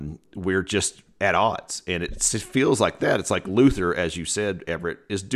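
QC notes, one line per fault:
Nothing to flag on this speech clip; I listened all the way through and heard no faults.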